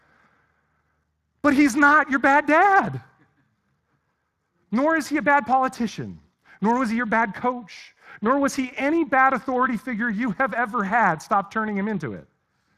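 Throughout, the Speex codec starves the excitation at a rate suggesting about 22 kbps, leaving the speech plainly hoarse and noisy, with nothing above 15.4 kHz.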